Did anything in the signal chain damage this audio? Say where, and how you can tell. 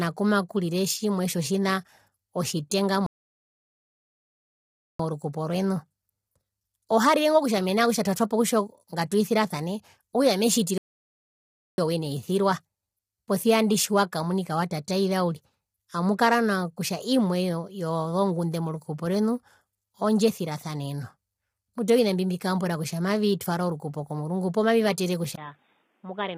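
Yes. The speech sounds rough and grainy from start to finish, with noise filling the gaps between harmonics and a synthetic-sounding top band. That points to the codec stage, likely low-delay AAC compression (AAC-ELD) at a low bitrate, consistent with about 24 kbps. Its short frames cannot resolve pitch harmonics cleanly.

Playback cuts to silence twice in mid-flow: from 3.06 to 4.99 s (1.93 s) after "kumakurire tjimwe tjotjina otjitenga", and from 10.78 to 11.78 s (1.0 s) after "ngatwisirasane okutja ami", resuming at "owina eisirwa". These are likely playback stalls, where the player starved of data or was blocked before recovering.

At 25.36 s, right after "okrukupo komurungu poo mavivatere", a 20 ms gap is followed by a duller, boxier sound to the end. The band becomes narrower, the level falls by roughly 10 dB, and a new, faint background noise appears. This is likely the input switching to a poorer device at the capture stage.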